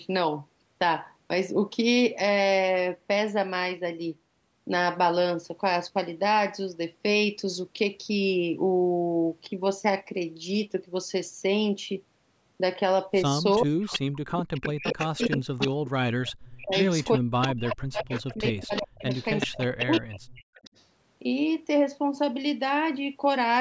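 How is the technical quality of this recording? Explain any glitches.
The recording has clear call-processing faults between about 13.5 and 20.8 s. The band stops at 8 kHz, as expected from call microphone processing.

Echo leak, 13.52 to 15.7 s and 16.24 to 20.84 s: a fainter copy of the speech trails it by 377 ms, about 10 dB down. This is likely because a loudspeaker's output slipped past the far end's echo canceller and was sent back. On a spectrogram, the harmonic patterns repeat, shifted right and dimmer.

Speech suppressed in double talk, 13.58 to 13.92 s and 14.5 to 20.49 s: the speech drops by as much as around 40 dB in chunks, about a third of a second in the first span and roughly 4 s in total across the second. This is likely because the echo canceller couldn't separate overlapping talkers and turned everything down. The waveform shows abrupt notches and gaps in the envelope.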